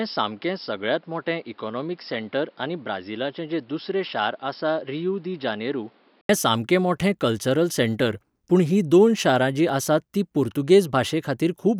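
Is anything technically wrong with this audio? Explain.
Yes. From the start to 6.29 s the speech is band-limited, with nothing above 5.4 kHz. It sounds dull and boxy, somewhat quieter, and carries its own faint background noise. At 6.29 s an 80 ms silence separates it from full-band, brighter sound. This is likely an input switched to a poorer device, then back. A simple filter change would not also shift the level and noise floor or leave a gap at the switch.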